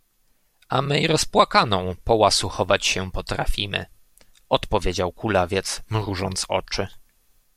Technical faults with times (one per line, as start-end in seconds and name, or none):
none